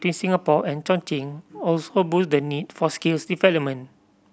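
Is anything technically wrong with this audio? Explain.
No, nothing technically wrong is audible in this speech recording.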